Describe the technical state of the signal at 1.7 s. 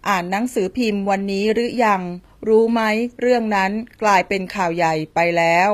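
At 1.7 s the speech carries the same damage it has from start to finish: the treble sounds bright but synthetic, s sounds come out gritty and lispy, and nothing remains above 14.9 kHz. This is likely HE-AAC compression, at a rate that fits roughly 24 kbps. Only the lower band is truly coded, and the highs are copied up from it and shaped coarsely, so harmonics don't line up. A plain low-pass would sound dull instead.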